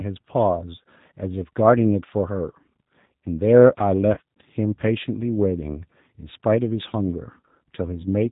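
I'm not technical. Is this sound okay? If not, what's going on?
No. The whole recording passed through the G.729 codec, a phone-call system that squeezes speech by rebuilding it from a rough model of the voice and drops everything above 4 kHz. The result sounds muffled, slightly rough and a bit artificial throughout.

Around 4.14 s to 4.19 s, there was VoIP packet loss concealed by the speech codec. About 30 ms of audio never arrived, so the decoder guessed by stretching the last bit of sound. You hear a brief smear that fades, with the voice staying weak or distorted just afterwards.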